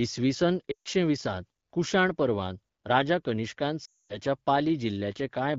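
At 0.71 s the speech drops to near silence for about 0.16 s, recovering on "वीसांत कुशाण पर्वांत राजा". Right after "कुशाण पर्वांत राजा कनिष्कान" it drops to near silence again from 3.85 to 4.18 s. These are lost AMR speech frames. Corrupted frames failed their check, so the AMR-WB decoder repeated its last good settings at falling gain until the sound faded.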